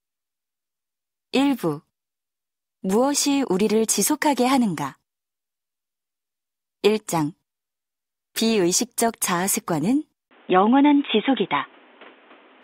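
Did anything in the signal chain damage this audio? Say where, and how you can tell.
Yes. At 10.29 s, after a 20 ms gap, the capture stage changes and the audio turns dull until the end. Nothing passes above 3.8 kHz, a new noise floor sits roughly 35 dB down, and the level stays about the same. The input likely switched to a poorer device, a narrower-band path with its own hiss.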